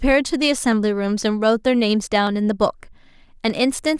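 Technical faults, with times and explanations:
2.27 s, dropped samples: a single sharp click cuts through the speech, far too brief to remove any audible sound. The likely cause is a fraction of a millisecond of samples going missing, so the waveform leaps straight from one value to a later one with nothing joining them. That abrupt step spreads energy across all frequencies, showing on a spectrogram as a thin vertical line from bottom to top, and on the waveform as a sudden discontinuity.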